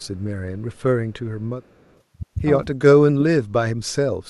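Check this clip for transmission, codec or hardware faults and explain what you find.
Two faults appear in this speech: an echo leak early on, then speech suppressed in double talk near the end.

Echo leak at 0.00–0.23, 0.73–0.82 and 1.63–2.01 s: a faint copy of the speech trails it by 269 ms, roughly 35–40 dB down. The likely cause is a loudspeaker echo that the far end's canceller failed to remove. On a spectrogram it shows as a weak, shifted ghost of the speech harmonics.

Speech suppressed in double talk at 2.85–3.07, 3.50–3.65, 3.81–3.90 and 4.09–4.29 s: the speech dips by about 25–35 dB in short chunks, likely because the canceller turned everything down while both sides talked. The waveform shows sudden notches in the envelope, and the spectrogram shows brief vertical gaps.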